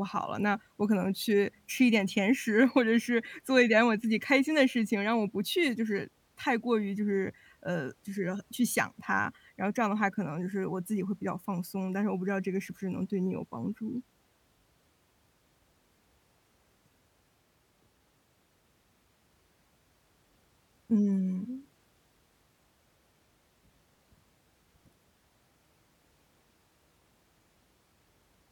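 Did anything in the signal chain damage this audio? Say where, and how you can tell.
No, nothing in the signal chain has damaged this speech recording. Listening across the whole clip, there is no point where the sound shows a sign of trouble at any stage.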